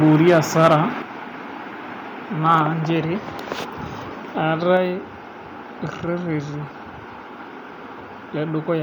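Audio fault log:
0.04–0.76 s and 2.52–2.55 s, microphone overload: the loudest speech peaks flatten, giving a harsh crackling edge. Likely the input level ran about 6 dB over full scale at first, clipping a few percent of samples, then about 1 dB over briefly.
1.02 s, microphone volume stepped down: the speech and background drop abruptly by about 6 dB in a single step, shortly after the distorted opening, likely the call software cutting the device's input volume in response to the clipping.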